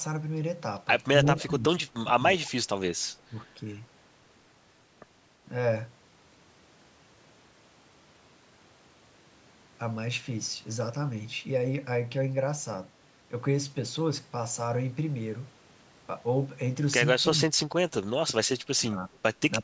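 An echo canceller on the far end likely failed to remove all of its loudspeaker pickup, so an echo leak sends back a faint copy of the speech 335 ms late. It is heard from 1.26 to 1.51 s at about 20 dB below the speech, and again from 2.42 to 2.51 s at about 25 dB down, as a delayed trace.

Overlapping with this, speech suppressed in double talk likely occurs when both sides talk at once and the canceller turns down the near talker along with the echo. The speech dips by about 10 dB from 1.34 to 1.65 s, drops by about 20 dB from 1.83 to 2.18 s, and briefly dips about 10 dB at 3.29 to 3.34 s. Later, from 17.36 to 17.81 s and 18.7 to 19.16 s, it sinks by about 30 and 25 dB.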